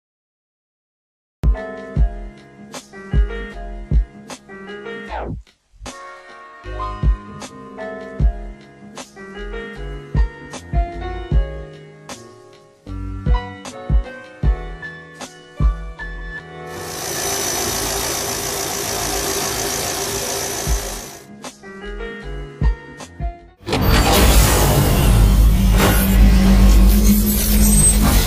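Cut-off start at 1.44 s: the audio is digital silence from 0 s to 1.44 s, then the sound appears abruptly in the middle of whatever was happening, with no attack or fade-in. Capture or streaming evidently began after the source was already playing, so the opening of the material is simply missing. The hard edge from dead silence to full signal gives the entry a clipped, jarring feel.

Channel delay (comb filtering) runs through the whole clip. One channel lags the other by roughly 20 ms, and when the two are combined to mono, content shared by both cancels at evenly spaced frequencies. The first notch falls at around 30 Hz, with further notches repeating up the spectrum. The result is a persistently rough, slightly doubled quality, and it stays fixed because the offset never changes.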